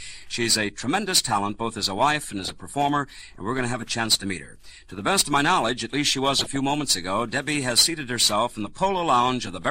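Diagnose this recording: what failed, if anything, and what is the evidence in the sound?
DAB burbling, at the codec stage, from weak broadcast reception feeding corrupted data to the MP2 decoder. Two bursts are heard, from 2.18 to 2.50 s and from 6.39 to 6.60 s. Bit errors slipped past error correction, which points to an error rate of a few tenths of a percent. Damaged samples put short noise blips in single sub-bands.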